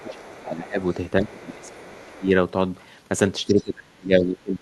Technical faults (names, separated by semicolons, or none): speech suppressed in double talk; other side's voice leaking through